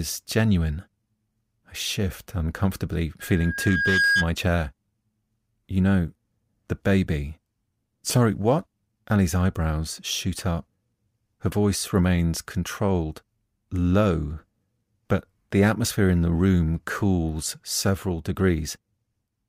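Loudspeaker feedback squeal in this speech clip from 3.20 to 4.30 s, just after "shift uncomfortably": a 1.6 kHz tone swells over roughly 0.7 s to about 5 dB above the speech, as the microphone's pickup of its own loudspeaker exceeds unity gain there.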